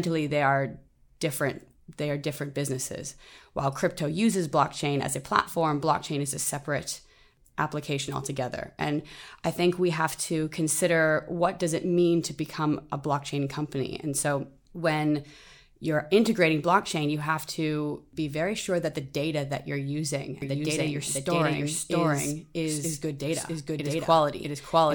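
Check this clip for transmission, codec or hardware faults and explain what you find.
One fault turns up near the end. From 20.42 s, just after "data that you're using", until the clip ends, a doubled audio track appears: a second full-band copy of the speech, about as loud as the original, trailing it by roughly 0.7 s. The likely cause is a slower second capture path or two misaligned copies in an edit. It sounds like a dry, clean echo with no room tail. On a spectrogram, each syllable repeats as an identical shifted pattern, and the waveform shows an abrupt onset of overlapping envelopes.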